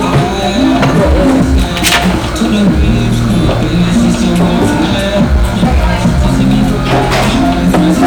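From the first moment to the last, the audio shows hard clipping. It was driven about 18 dB past what one stage could pass, so every loud moment has its peaks sliced flat, with roughly one sample in seven pinned at the limit. Those square-topped waveforms throw harmonics high up the spectrum, heard as a harsh fuzz on each loud sound. Soft saturation would round peaks off gently. Here the edge is abrupt and buzzy.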